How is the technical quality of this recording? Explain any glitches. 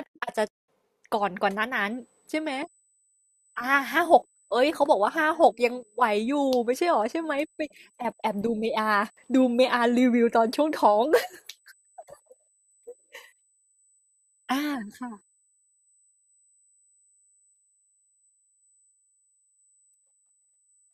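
The speech carries one fault, USB whine, from 1.9 s to the end: a steady 8 kHz tone about 40 dB below the speech. USB microframe current at 125 µs intervals leaks through power or ground. It sounds like a thin high whistle and shows as a flat horizontal line at 8 kHz on a spectrogram.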